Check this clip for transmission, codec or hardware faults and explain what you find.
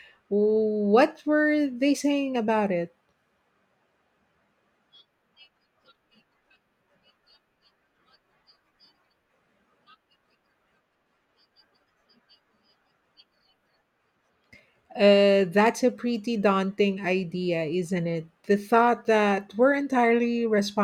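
No faults can be heard.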